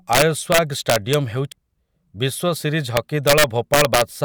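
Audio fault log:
0.13–1.14 s and 2.97–4.02 s, integer overflow: the loud stretches of speech are pushed roughly 5 dB past full scale, and instead of being held at the ceiling, each overshooting peak wraps around to the opposite extreme of the integer range. Every one of those jumps is a near full-scale step, so you get harsh, violent cracks riding on the louder syllables, much sharper and nastier than ordinary clipping.
1.52 s, damaged data in a compressed stream: a tiny stretch of the encoded stream is corrupt, so the decoder misreads that frame and has to resync on the next valid header. What comes out is a brief glitch lasting just a few milliseconds.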